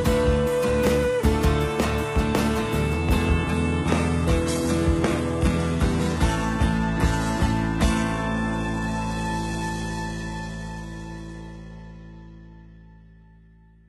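From 3.25 s to the end the treble abruptly thins, with nothing above about 11.8 kHz and a synthetic, swirly top, though the sound never breaks. This is an adaptive stream at a lower bitrate, which fits a switch from 96 kbit/s AAC to 16 kbit/s HE-AAC.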